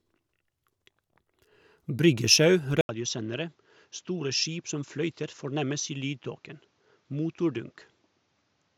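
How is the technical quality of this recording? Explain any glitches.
The recording has one clear fault. At 2.81 s, after a gap of 80 ms, the speech abruptly drops noticeably in level and loses everything above 7.6 kHz, with a new faint background hiss. This is likely an input switched to a poorer device, whose narrower band and own noise persist to the end.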